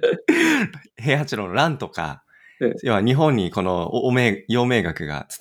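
No technical faults are audible.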